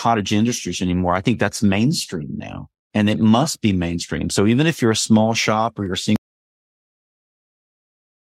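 At 6.16 s the speech cuts off abruptly into an audio dropout to silence that runs to the end of the clip, about 2.2 s. The input was likely lost while silence kept being written. Unlike a fade or noise gate, there is no tail and no room tone, just dead silence.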